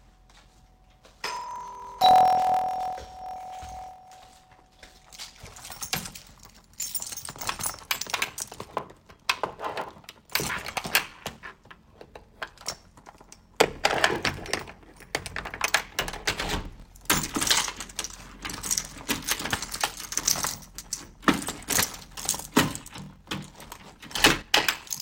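From the start, a steady low buzz at about 41.7 Hz runs under the sound, and everything plays slow, at 0.889 times normal speed, with its pitch roughly unchanged. This is a block size mismatch (padded): each block is written short, which fits 1024-sample blocks, and the remainder is filled with silence.

From 10.49 to 10.51 s, the sound jumps forward, losing roughly 150 ms of audio. Compressed frames were skipped here: several consecutive frames of about 21.3 ms each were never played.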